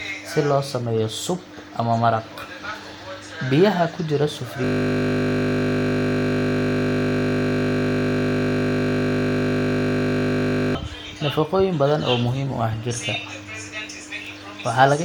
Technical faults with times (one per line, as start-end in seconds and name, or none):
4.64-10.75 system hang loop